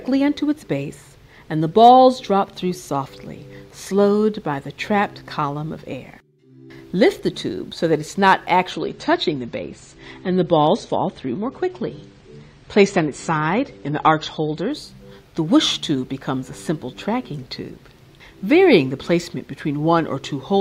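From 8.71 to 14.71 s, an adaptive stream at a lower bitrate removes everything above 9 kHz and raises codec artefacts, switching abruptly but without the gap a rebuffering stall leaves.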